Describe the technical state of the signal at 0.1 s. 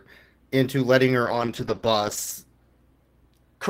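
At 0.1 s the audio is intact, with no audible technical fault at that point.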